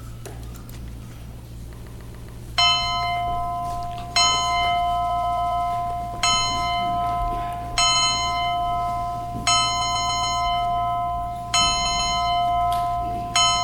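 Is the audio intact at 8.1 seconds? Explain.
No. Repeated frames affect 7.94 to 8.08 s. A 69.7 ms block of compressed audio plays twice more, causing a short stutter and adding 139.3 ms.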